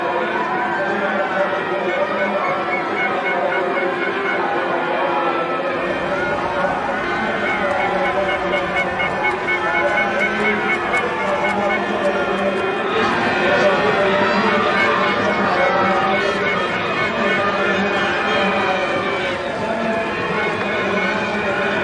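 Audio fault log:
No fault found in this audio.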